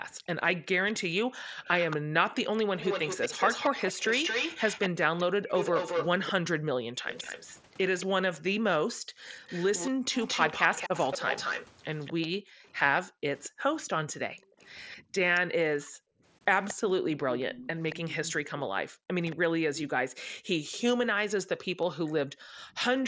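From 0.12 to 2.18 s the room sound behind the speech suddenly sinks, by about 40 dB at its deepest, in short dips adding up to under a second, then returns. The same dips recur from 8.42 to 10.05 s, 12.37 to 16.24 s (around a second and a half of dropouts) and 18.89 to 22.58 s. This is background gated by the echo canceller: while the far-end loudspeaker played, the canceller clamped the microphone down hard and released it afterwards.

From 0.92 to 19.36 s a second copy of the speech trails the original by about 225 ms, only slightly quieter than the speech itself. This is an echo leak, likely from a loudspeaker on one side whose echo canceller failed to remove what its microphone picked up, so the leftover was sent back down the call.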